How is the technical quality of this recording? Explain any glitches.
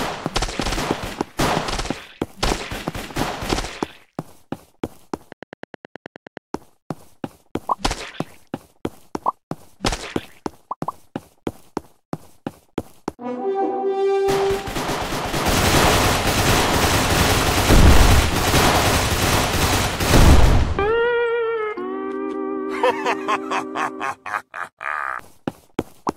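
One glitch stands out, a brief train of clicks between 5.32 and 6.38 s. About ten similar pulses arrive at a regular 9.5 per second, likely from electrical interference or a faulty connection or power supply, ticking over the sound and peaking about 5 dB above it. A waveform shows evenly spaced sharp spikes, and a spectrogram shows matching thin vertical broadband lines.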